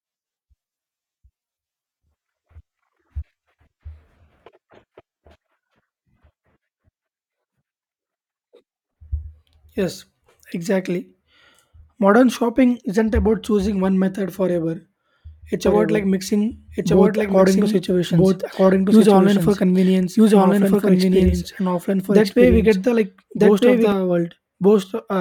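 A speech recording with a doubled audio track from 15.66 s to 23.92 s. Over that span a second, full-band copy of the speech plays roughly one and a half seconds behind the original, at about the same level, so the two streams overlap and blur intelligibility. The copy carries no decay or room colour and starts and stops abruptly, which points to a signal likely captured twice, once through a slower path, rather than to acoustic reflection.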